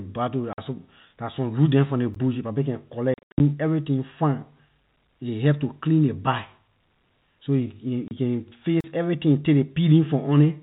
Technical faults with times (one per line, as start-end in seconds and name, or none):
0.53-0.58 packet loss filled with silence
2.14 block of digital silence
3.14-3.40 packet loss filled with silence
8.08-8.11 packet loss filled with silence
8.81-8.84 block of digital silence